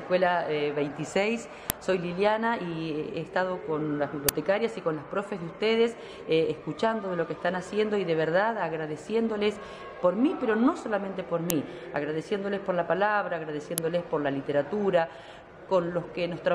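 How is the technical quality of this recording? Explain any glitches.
The recording has four brief glitches, all from an uninitialised buffer. At 1.70, 4.29, 11.50 and 13.78 s, blocks of leftover memory play as loud digital noise bursts lasting about 1.5 to 6 ms, which fits 64- and 256-sample blocks.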